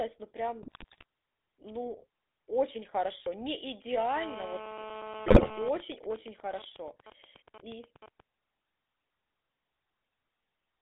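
A speech recording passed through the GSM full-rate codec, which rebuilds the voice from a vocal-tract model fed by a thinned, regularly pulsed excitation. The sound fits the 13 kbps full-rate scheme: the whole clip is confined to a 300 Hz to 3.6 kHz band and carries a plainly audible buzzy, gravelly roughness in place of natural voicing. Twice the radio link corrupted the coded stream badly enough for GSM bit errors to reach the decoder, bending the filter, pitch and gain values of each damaged frame. From 0.62 to 1.04 s, at a bit-error rate of about 5.3%, the speech breaks into squawks, pops and gargling across a span that fits roughly 20 damaged frames. From 5.26 to 5.56 s the same breakup returns at about 4.1%, over a stretch that fits around a dozen frames. Meanwhile, a 2G handset in an active call sat close to the audio circuitry, which rectified its radio bursts into GSM phone buzz. 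From 4.16 to 5.69 s this is a hard, raspy 217 Hz buzz with many harmonics, only about 7 dB below the speech, steady and unrelated to what is said, and it overlaps the second error burst. From 5.80 to 8.20 s that phone's user falls silent in the call and the phone transmits only in short groups of bursts, producing GSM signalling bursts: even ticks with a longer 217 Hz buzz twice a second, around 15 dB below the speech.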